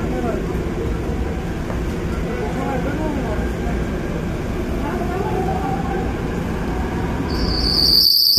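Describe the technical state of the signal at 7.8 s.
At 7.8 s a loudspeaker feedback squeal is under way. It starts at 7.29 s and lasts to the end at 8.38 s. A microphone is picking up the loudspeaker it feeds. At 4.5 kHz the loop gain exceeds one. That single tone swells over well under a second and sits about 10 dB above the sound.

The whole clip, including this moment, sounds rough and grainy. Noise fills the gaps in the sound's structure and the top band loses detail. The likely cause is low-delay AAC compression, AAC-ELD at 32 kbps. Its short frames resolve fine frequency detail poorly at that rate.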